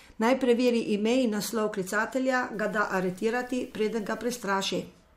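From 2.54 s to 4.43 s the speech turns grainy, a low bit depth without dither fault. The coarse, signal-following distortion, roughly 35 dB below the speech, fits 8-bit truncation, likely from undithered requantisation.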